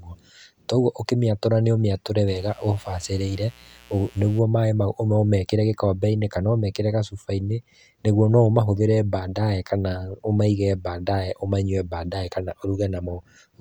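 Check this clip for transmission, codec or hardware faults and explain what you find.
A steady, raspy buzz sits under the speech from 2.28 to 4.39 s, well below the speech level: mains buzz, where sharp switching spikes from 60 Hz mains leak in, spraying harmonics into kilohertz.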